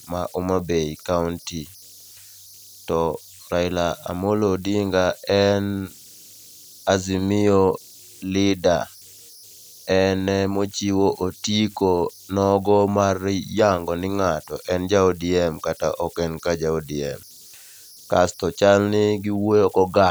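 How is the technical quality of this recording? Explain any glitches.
The recording has one fault that persists for its whole length: converter idle tones. Throughout the clip, a whistle sits around 5 kHz, about 28 dB below the speech. It stands out most in pauses and turns grainy beneath quiet passages. An undithered delta-sigma converter, fed low-level input, falls into repeating bit patterns that generate this tone. On a spectrogram it appears as a thin horizontal line near 5 kHz.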